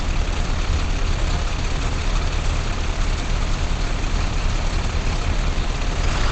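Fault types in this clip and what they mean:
Opus compression: Everything is cut off above 8.7 kHz, and the sound comes across as muffled and hoarse, which points to a likely Opus encode in its speech-oriented wideband mode at about 16 kbps. Unlike MP3, it has little swirling and few watery holes, just a dull, rough coarseness throughout.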